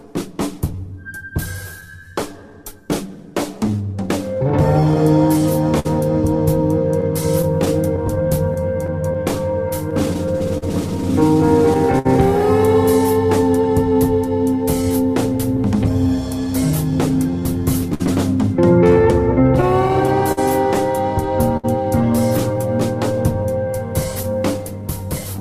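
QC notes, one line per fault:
Throughout: clock drift between sender and receiver. The sender's clock runs roughly 4 percent slow, so the receiver's buffer keeps draining and has to be topped up. You get a faint, uneven unsteadiness in timing that never quite settles for the whole clip.
0.06 to 24.83 s: repeated timing corrections. To cover for the slow sender, the receiver keeps stretching the audio by repeating tiny slices, adding around half a second in total, so playback runs at 98 percent speed. It comes across as small hiccups and a slightly dragging, lopsided tempo.
5.79 to 12.07 s, 17.94 to 21.66 s, 23.43 to 25.40 s: scattered short gaps. Packets went missing here and there, about fifteen in the first stretch, about seven in the second and a handful in the last. The receiver patched each by carrying the last sound forward. The fills run up to about 70 ms in the first two stretches and only around 10 ms at the end, heard as brief ticks and smears.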